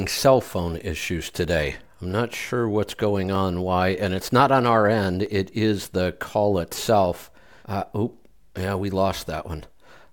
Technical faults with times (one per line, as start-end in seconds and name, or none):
0.49-10.05 clock drift buffer slips